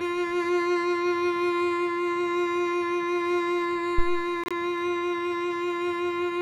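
A phantom power thump lands at 3.98 s in the music, with its disturbance running to about 4.31 s. A supply on the live input was switched, and that sudden DC step passed through the coupling capacitors into the signal path. The result is a deep, low thud that dies away quickly, with a decay of about 73 ms, leaving a brief low-frequency swell beneath the music until 4.31 s.

A corrupt frame muted dropout follows from 4.44 to 4.52 s. Flipped bits in the compressed stream made the decoder reject the damaged data, and the player filled the gap with silence. The music cuts out abruptly for about 80 ms, a length that fits a run of roughly three codec frames, then resumes with its timing intact, so nothing after the hole is shifted.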